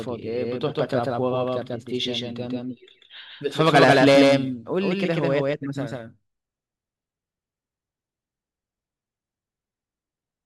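A doubled audio track runs through the whole clip: every syllable of the speech is followed by a second, identical copy arriving roughly 150 ms later and at about the same loudness as the first. The copy is full-band and dry, with no decay or room colour, so it sounds like a hard slapback rather than a reverberant tail. The likely cause is the same signal reaching the mix twice, once through a slower capture path.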